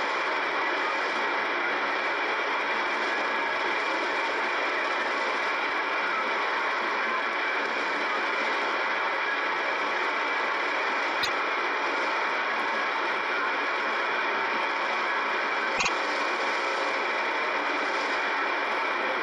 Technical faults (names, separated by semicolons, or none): repeated frames